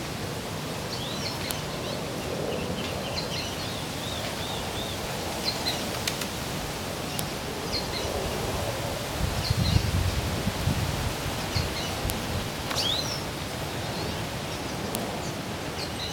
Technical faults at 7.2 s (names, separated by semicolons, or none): file header played as audio